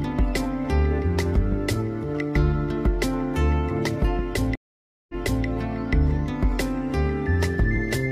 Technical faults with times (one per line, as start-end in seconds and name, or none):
4.55-5.46 stream reconnect